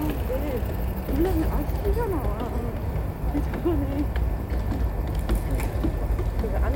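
No technical faults are audible.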